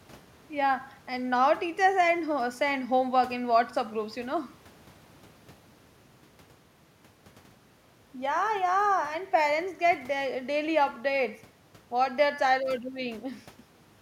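Listening through the speech, nothing stood out as a technical fault at any point.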